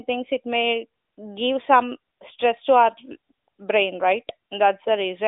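No technical faults are audible in this recording.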